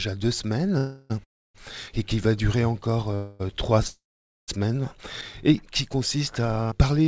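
Call audio freezes at 0.78, 1.24, 3.15 and 3.87 s stall the sound for about 0.25 to 0.6 s. Each one is a fading buzz, with the second and fourth going silent, before the audio resumes where it left off. It's likely the jitter buffer ran dry while packets were held up. The band stops at 8 kHz, which fits a G.722-style call codec.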